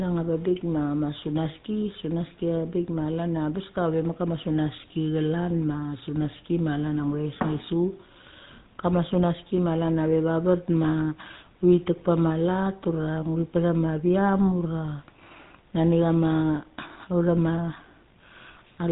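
From start to finish the speech has gone through the GSM full-rate codec, the original mobile-phone coder, and the damage is plainly audible. It rebuilds the voice from a vocal-tract model fed by a sparse, regular pulse train, so everything takes on a buzzy, gravelly grain. There's also nothing above about 3.8 kHz, which leaves it muffled and boxy. The character fits roughly 13 kbps full-rate coding.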